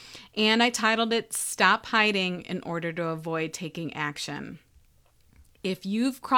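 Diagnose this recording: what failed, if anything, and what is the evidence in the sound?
Nothing stood out on listening to this speech recording, and no stage of the chain shows any sign of a problem.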